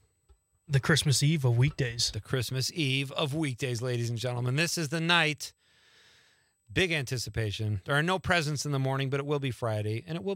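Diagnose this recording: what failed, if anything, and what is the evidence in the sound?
The analogue wiring is where it went wrong. USB whine runs through the whole recording, a fixed-pitch tone at 8 kHz that is strongest at 16 kHz, roughly 45 dB under the signal. That pitch matches the bus's 125-microsecond microframe current pulses leaking in through power or ground.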